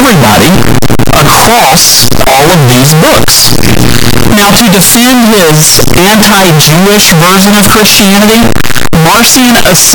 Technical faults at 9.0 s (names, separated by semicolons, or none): signed and unsigned mixed up